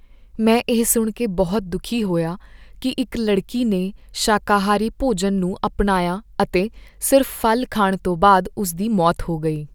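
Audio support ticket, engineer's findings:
Listened through the whole speech recording and nothing in it caught my ear as a fault, so there's no component to point at for this ticket.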